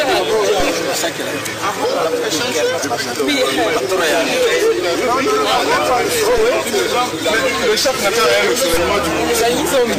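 There are three DC steps in this audio, at 0.60 s, 6.38 s and 8.74 s. Each time the waveform's zero line jumps suddenly by about -12 dBFS, so you get a low thump or click while the sound itself carries on untouched. The offset doesn't hold. It drains away as if through a high-pass around 5 Hz, which points to something like a converter recalibrating or an offset-carrying input being switched in.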